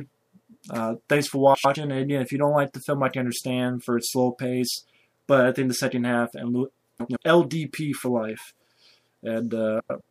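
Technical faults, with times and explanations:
1.54–1.76 s, 6.99–7.17 s and 9.79–10.01 s: frames out of order. Two adjacent blocks of about 105 ms, 78 ms and 105 ms, consistent with runs of four, three and four frames, play swapped, giving a garbled flutter but no lost time.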